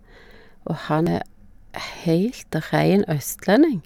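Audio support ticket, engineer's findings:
Damaged data in compressed stream at 1.07 s: brief glitch in speech; corrupted frame bytes, decoder loses sync, resyncs at next frame header.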